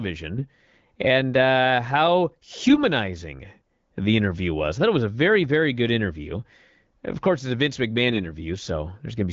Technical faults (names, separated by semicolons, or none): AMR bit errors